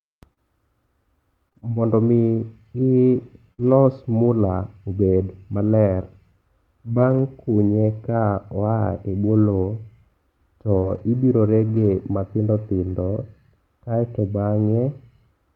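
From 0.33 to 3.72 s there are scattered short gaps: about five brief holes, the longest around 50 ms, where packets arrived late or not at all. The receiver bridged each by extending the preceding sound, giving small ticks and smears. On a spectrogram they appear as short, smoothed stretches where harmonics flatten before real detail resumes.

Between 6.98 and 7.2 s, a lost packet rebuilt from error correction repeats across about 120 ms, which fits six 20 ms packets. Each was recovered from a low-bitrate copy carried in the following packet, so there is no gap. The sound turns rougher and grainier, and the spectrogram shows a noisier, less defined texture.

At 10.78 s comes a short concealed packet loss. About 40 ms never arrived and was filled by continuing the prior sound before crossfading back, heard as a brief wobble. The waveform shows a short repetitive or smoothed patch instead of natural variation.

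Error-correction rebuilding returns immediately after, from 10.82 to 11.0 s (about 100 ms), and again from 11.76 to 11.86 s (about 60 ms). Both show the same coarse, noisy texture.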